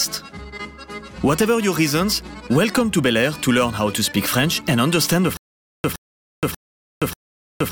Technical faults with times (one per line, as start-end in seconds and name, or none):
5.37-7.71 stutter with silent gaps